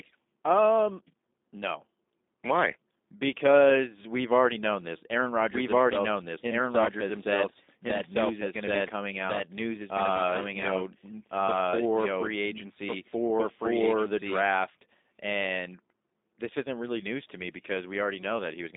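From the very start the whole clip carries G.729 codec damage. Nothing gets above 3.8 kHz, the band sits around 250 Hz to 3.7 kHz, and the voice has that rough, slightly synthetic edge of pulse-based reconstruction, which fits G.729A at 8 kbit/s.

Then from 5.54 s to 14.44 s there's a doubled audio track. A second, equally loud copy trails by about a second and a half, with no room colour, switching on and off abruptly. It's likely a second capture path running slow.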